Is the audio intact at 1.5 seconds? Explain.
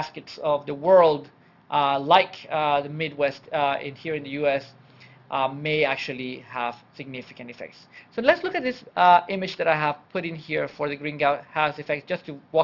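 No. At 1.5 seconds, as across the whole clip, aliasing is present. Content above about 6 kHz was folded back below that edge, which fits a sample rate lowered from 48 kHz to 12 kHz without an anti-alias filter. Those folded components, roughly 30 dB under the main sound, land at wrong, unrelated pitches, giving a gritty, metallic edge. Plain band-limiting would only sound dull; here the spectrum stays busy right up to 6 kHz.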